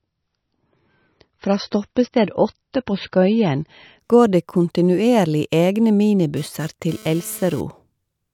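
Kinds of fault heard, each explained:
Adaptive stream starting at a low bitrate: speech opens dull, nothing above 6 kHz, sounding like a 24 kbit/s start, then jumps cleanly to fuller quality at 4.0 s without any dropout.
GSM phone buzz: a hard, raspy 217 Hz buzz rich in harmonics, about 24 dB below the speech, appears from 6.37 to 7.61 s and stops, matching intermittent data bursts rather than mains hum.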